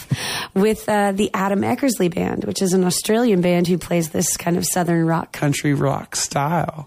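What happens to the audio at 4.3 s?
Nothing goes wrong at 4.3 s; the audio runs on intact through that moment.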